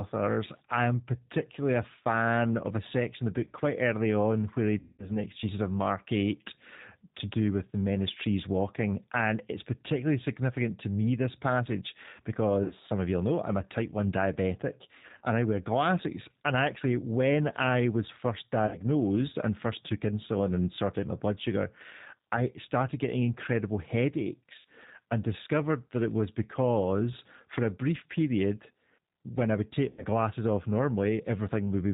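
G.729 codec, throughout the speech: the 8 kbit/s coder rebuilds the voice from a vocal tract filter, pitch predictor and sparse pulses. It sounds plainly rough and synthetic, with nothing above 4 kHz.

VoIP packet loss concealed by the speech codec occurs at 4.79–5.11 s (about 200 ms lost), 12.64–12.72 s, 14.97–15.21 s (scattered gaps just before "and I wear glasses"), 18.67–18.78 s after "when I was first", 24.59–24.64 s, and 29.90–30.05 s between "when I would take" and "glasses off". Each time, the decoder extends its last pitch and filter into a buzzy tone or coloured noise that fades. Because each frame builds on the previous one, the voice stays weak briefly after packets resume.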